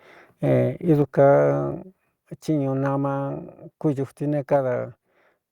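Three sudden level drops in the speech: about 3 dB at 1.02 s, another 3 dB at 2.04 s, and about 2 dB at 4.56 s right after "kúduti ne". Voice and background step down together, likely a microphone volume stepped down by the call software.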